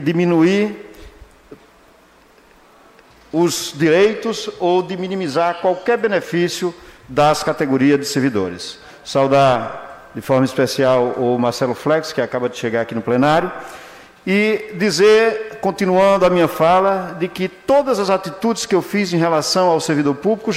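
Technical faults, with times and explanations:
Nothing technical goes wrong anywhere in this one, so there's nothing to flag here.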